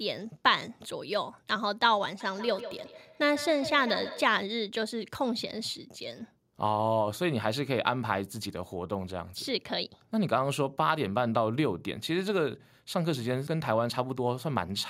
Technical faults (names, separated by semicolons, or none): feedback echo between two devices